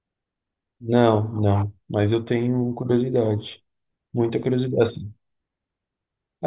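Nothing in the signal points to a technical fault; the speech arrives as one continuous, intact recording with no breaks, distortion or dropouts anywhere along its course.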